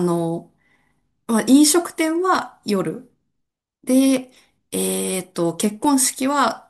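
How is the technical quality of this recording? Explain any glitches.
The recording has two brief glitches, both clicks. They come at 2.35 s and 5.85 s. Each is a single sharp tick, with no gap in the speech. The likely cause is dropped samples: a tiny run of samples, well under a millisecond, goes missing. The waveform then jumps straight to a later value. That sudden step makes the click. On a spectrogram each one shows as a thin vertical line.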